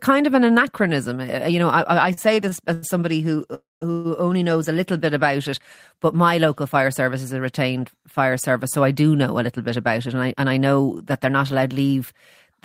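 Packets reaching the receiver of this speech recording late and unevenly drained its jitter buffer several times, causing repeated stalls (stutter) between 2.13 and 2.84 s. This happens just after "you know I I" and before "somebody who". The receiver stretched the last sound over four short gaps totalling 171 ms, the longest 91 ms, so about a quarter of that span is filler. Nothing is lost, but the phrase hitches and drags. Packets that were likely held up in transit then emptied the buffer outright, producing two call audio freezes. From 3.54 to 3.83 s the receiver carried the last sound forward for 270 ms, and it decays into about 170 ms of silence before the audio resumes where it stopped. From 3.91 to 4.07 s, after "somebody who" and before "only knows a little", a shorter 131 ms freeze extends the sound as a continuation without fading to silence. Each freeze inserts a gap equal to the hold-up, so the delay grows by that amount while no speech goes missing. 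Later the buffer held more audio than its target, so the receiver triggered a jitter buffer speed-up from 9.38 to 10.89 s, leading into "that they're not allowed". It removed many pitch-period-sized slices, roughly 150 ms in all. The speech runs at 108% of normal speed with unchanged pitch and sounds rushed.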